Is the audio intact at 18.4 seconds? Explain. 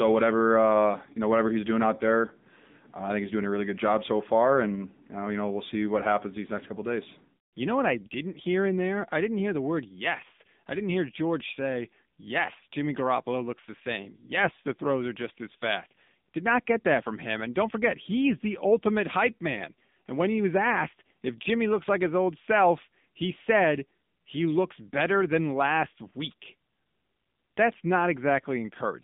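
No. The speech at 18.4 s, like the whole clip, has passed through the AMR narrowband mobile codec, which rebuilds the voice from a vocal-tract model. The buzzy, synthetic texture points to a low bitrate near 8 kbps, and the line is confined to 150 Hz to 3.7 kHz.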